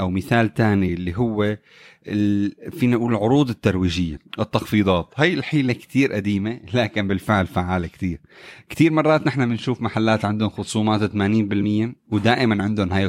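Speech, with two kinds of fault. Compressed frames skipped: whole frames never reached playback, either missing from the file or rejected by the decoder as damaged, so the speech jumps ahead by roughly 20 ms at 0.85 to 0.90 s and at 7.08 s, and roughly 40 ms at 4.16 s and 11.58 to 11.64 s. From 4.74 to 5.70 s, playback slows by 5.6% and pitch drops by a full semitone (100 cents). That is likely a drift correction step, where clock-matching software changed the rate in one jump to rebalance its buffer.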